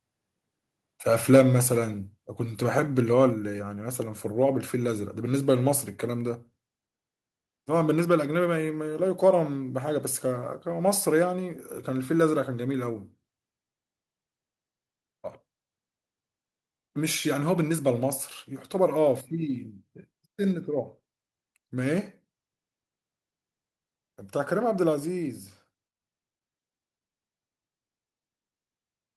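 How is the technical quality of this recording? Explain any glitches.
One glitch is audible in this speech recording. A microphone volume stepped down at 3.3 s: the voice and background drop abruptly by about 4 dB, likely because the call software lowered the input gain after sensing an overly loud signal.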